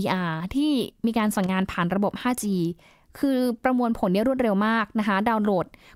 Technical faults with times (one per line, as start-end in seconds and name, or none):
1.44-1.49 loose connector crackle